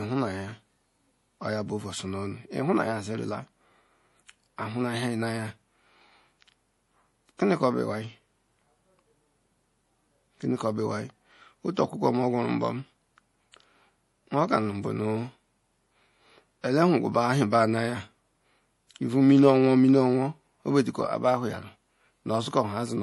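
MP3 compression runs through the whole clip. The speech has nothing above 11.5 kHz, and the remaining treble sounds watery and swirly, with metallic chirps on s sounds and smeared consonant attacks. The likely cause is an MP3 encoder short of bits, which fits a low bitrate around 48 kbps. The encoder cut the top band at a fixed frequency and dropped weak frequency lines that flicker on and off from frame to frame.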